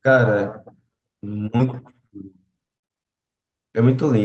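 Short concealed packet loss occurs at 1.57–1.61 s and again at 2.07–2.11 s. Each time about 20 ms of the stream failed to arrive before playback, and the receiver covered the hole by extending the preceding sound, carrying its pitch forward where it was voiced and substituting shaped noise where it was not, before easing back into the real signal. Both are heard as a brief smear or wobble in the flow of the speech.

Repeated packet loss (robotic sound) follows from 2.67 to 3.06 s. Here the stream kept dropping out, leaving several holes, the longest about 58 ms, and roughly two fifths of that stretch is synthetic fill. Each patch extends the last sound, and the next gap arrives before the audio has recovered. The passage turns choppy, with fragments missing, all heard against a top end that stops near 8 kHz from the call codec.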